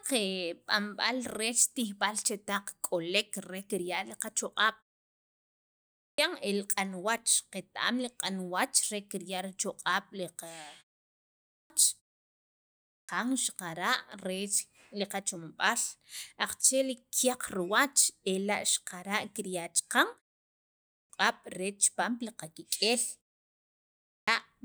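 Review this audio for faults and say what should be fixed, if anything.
The speech has a clipped start after a pause five times: at 5.63 to 6.18 s, 11.19 to 11.70 s, 12.50 to 13.09 s, 20.52 to 21.10 s and 23.71 to 24.28 s. Each follows a gap of 0.39 to 0.89 s. The output device drops into a sleep state during the silence. It then needs time to wake. About 0.51 to 0.59 s of sound is lost each time, so speech resumes abruptly, missing its opening. The fix is to keep the output path active through silence rather than letting it power down.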